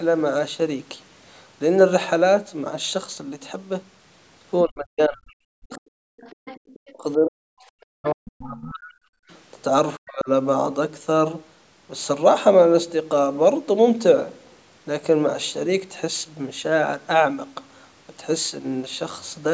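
Speech suppressed in double talk, from 4.64 to 6.15 s: the speech dips sharply, at worst by about 40 dB, likely because the echo canceller could not separate this talker from loudspeaker echo while both sides spoke, and turned everything down.

Other side's voice leaking through, briefly at 5.7 to 5.8 s and again from 6.2 to 6.93 s: a second, faint voice sits about 25 dB under the speech, likely the far end's loudspeaker sound that the echo canceller failed to remove.

Speech suppressed in double talk returns from 6.94 to 9.25 s and at 9.97 to 10.29 s, with the same deep gating of the speech.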